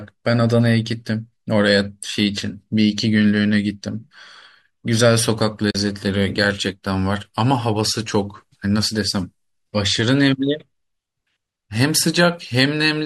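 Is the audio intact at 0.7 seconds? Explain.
Yes, the audio is intact at 0.7 seconds, with no fault at that moment.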